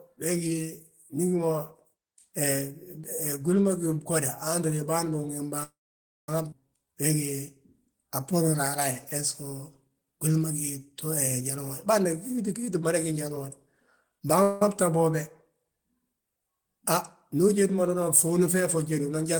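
Call audio freeze at 5.63–6.29 s and 14.43–14.62 s in this speech recording: the last sound is stretched into a fading fill, silent for about half a second in the first case, likely because delayed packets emptied the jitter buffer, with nothing lost once playback resumes. Skip ahead at 6.50–6.53 s: roughly half a second of speech is dropped and the two sides are joined almost directly. Jitter buffer slow-down at 7.85–8.56 s and 9.89–10.86 s: repeated pitch periods rebuild the buffer, running at 91% and 89% speed with the pitch unchanged. Jitter buffer speed-up at 11.41–14.39 s: short pitch-period pieces are removed, around 0.4 s in total, so the speech runs at 112% and sounds hurried.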